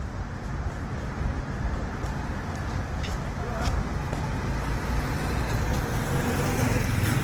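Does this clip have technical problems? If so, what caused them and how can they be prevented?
Yes. Throughout the clip the sound is rough and grainy, with tonal parts turning noisy, while the top end stays open to about 20.2 kHz with no muffling. This is likely Opus compression in its full-band music mode, at a rate that fits roughly 16 kbps: band energies are kept, but starved bands are filled with folded or noise content. That graininess, rather than the swirly spectral holes of MP3, marks it as Opus. Encoding at a higher bitrate prevents it.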